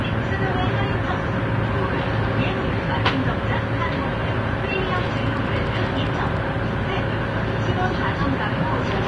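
From start to finish the sound is hissy and grainy, likely from Vorbis compression at a low setting, roughly what a 30 kbps stream would give. Nothing survives above 10.6 kHz. A spectrogram shows a hard ceiling there and speckled, noisy treble below it. Attacks look smeared.

From 4.97 to 6.38 s a train of clicks ticks over the sound at a steady 10 per second, about fifteen in all, peaking roughly 5 dB above the surrounding level. The likely cause is interference or a faltering interface. The waveform shows evenly spaced, similarly shaped spikes, and the spectrogram shows thin vertical lines.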